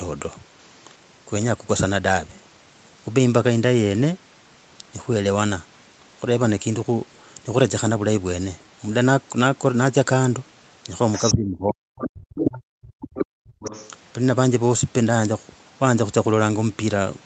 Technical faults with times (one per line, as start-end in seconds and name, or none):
11.13-11.32 other side's voice leaking through
11.32-13.23 speech suppressed in double talk
12.40-12.45 other side's voice leaking through
13.17-13.26 other side's voice leaking through
13.51-13.60 background gated by the echo canceller
13.60-13.89 other side's voice leaking through